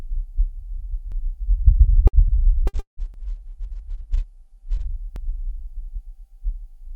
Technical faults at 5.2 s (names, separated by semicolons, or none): overlapping chunks